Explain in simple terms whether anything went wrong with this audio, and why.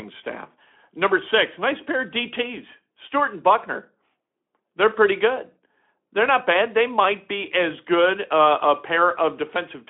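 Nothing went wrong: the speech passes through a Speex speech codec working as intended, which keeps it to a telephone-style band with nothing above about 3.7 kHz, and no faults turn up anywhere in the clip.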